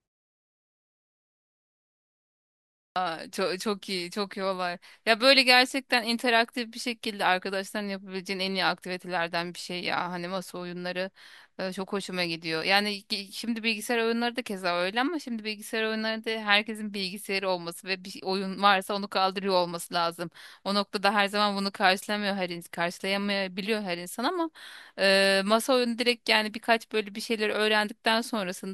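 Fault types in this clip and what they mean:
Clipped start after a pause: at 2.69 s, after 2.69 s of silence, the output device wakes late and swallows 269 ms, so speech begins abruptly.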